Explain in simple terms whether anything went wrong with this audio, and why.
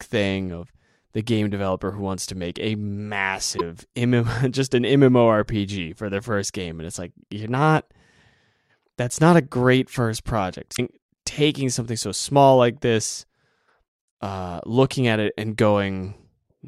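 Two short glitches at 3.54–3.61 s and 10.73–10.80 s (after "a great first project") come from damaged data in a compressed stream: the player briefly misread broken frames.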